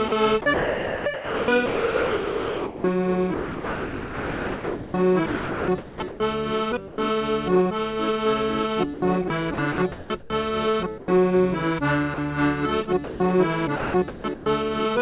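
From 0.08 to 6.2 s the sound keeps breaking up, with about 4.5 s of it replaced by a hiss. This is likely sound chopped by the voice detector, which repeatedly judged the audio as background and sent comfort noise instead. Shorter choppy stretches follow at 8.94–10.3 s (about 0.5 s replaced) and 13.76–14.46 s (about 0.46 s).

Brief gaps filled with steady noise occur at 6.88–6.98 s (100 ms), 10.98–11.08 s (100 ms), 12.14–12.18 s (40 ms) and 13.04–13.2 s (160 ms). These are likely sound dropped by the voice detector: it stopped sending momentarily, and the receiver filled the hole with comfort noise until sending resumed.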